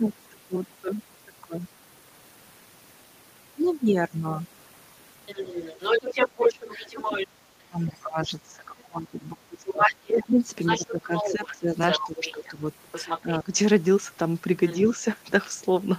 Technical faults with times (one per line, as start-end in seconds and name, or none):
5.26-7.26 other side's voice leaking through
6.69-12.63 speech suppressed in double talk
7.87-8.80 other side's voice leaking through
9.66-13.38 other side's voice leaking through
13.21-13.52 speech suppressed in double talk
14.67-14.96 other side's voice leaking through